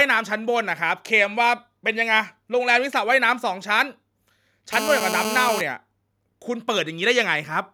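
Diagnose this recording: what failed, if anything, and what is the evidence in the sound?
GSM phone buzz from 4.73 to 5.61 s, at the analogue wiring stage: a hard, raspy 217 Hz buzz rich in harmonics sits about 4 dB below the speech and holds steady, as during a call. A nearby 2G handset's bursts are being rectified by the audio circuitry.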